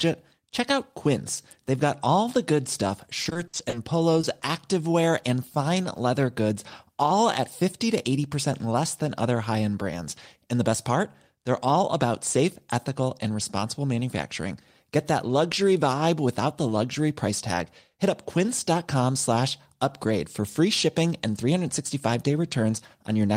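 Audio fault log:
3.23–3.75 s, repeated packet loss (robotic sound): just after "all the good stuff", six gaps totalling 180 ms, the longest 60 ms, go missing, and each is patched by extending the preceding sound. About a third of the span is synthetic, so it turns choppy. A spectrogram shows stretches of smeared, frozen harmonics alternating with real texture.
4.21 s and 4.39 s, short concealed packet loss: two 20 ms holes just before "activewear and fine leather" are each filled by continuing the last sound, then crossfaded back into the real signal, giving brief smears or wobbles. The waveform shows short, overly smooth patches.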